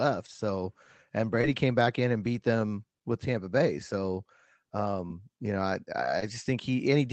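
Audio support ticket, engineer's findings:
Short concealed packet loss, three spots: 1.41–1.45 s just before "came back in and", 5.07–5.12 s just before "you know I", 6.20–6.24 s right after "you know I". Each is a brief smear or wobble where roughly 20 ms went missing and the receiver patched it by stretching the preceding sound, then blending back. Likely jitter-buffer/network drops on the call leg.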